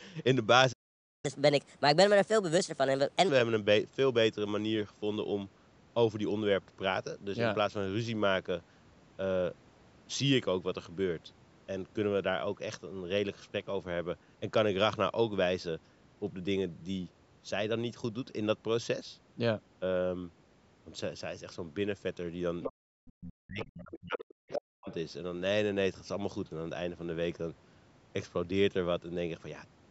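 At 0.72 s the speech simply stops for about half a second, until 1.25 s, and then picks up again. That's most likely a playback stall. From 1.25 to 3.29 s you get the catch-up at higher speed: the player races through its backlog at 1.25x, so everything runs about four semitones sharp before settling back. Around 22.6 s the other side's voice likely starts leaking through, in brief scraps at 22.62, 23.08, 23.59, 23.94, 24.5 and 24.88 s. The first and fifth are nearly as loud as the talker, and the rest are fainter. Right after the first scrap, from 22.72 to 22.86 s, the room background gets gated by the echo canceller, dropping by about 40 dB. From 23.14 to 24.88 s the talker's speech keeps dipping by as much as about 40 dB, over roughly a second and a half in total, which fits speech suppressed in double talk.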